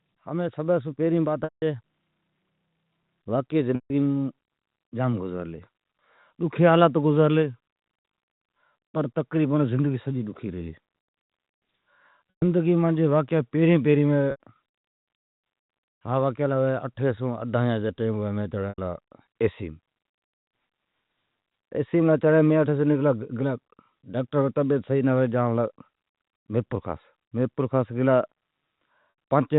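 Packet loss with pitch repetition breaks the speech at 1.44, 3.75, 12.30, 14.31, 18.69 and 29.1 s. The gaps run from 180 ms down to 60 ms. The receiver fills each one by repeating the last pitch period. It sounds like a brief, buzzy held tone that fades away.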